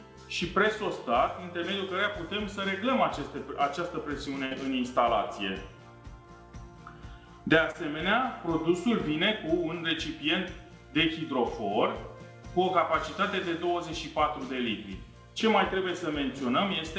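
Audio carried over a call link, with nothing above 8 kHz, which fits a wideband G.722 codec. At 4.46 to 4.53 s there is a burst of packet loss. About 52 ms of held, fading sound continues the last sound and turns it down, and the audio then resumes with roughly 60 ms skipped. That audible hold-and-fade followed by a jump marks it as a burst rather than a brief glitch. At 7.71 to 7.76 s a short concealed packet loss leaves only a quick smear or wobble. About 30 ms was synthesised from the preceding sound and blended back, with about 40 ms missing. It is too brief to become a sustained buzz or hiss.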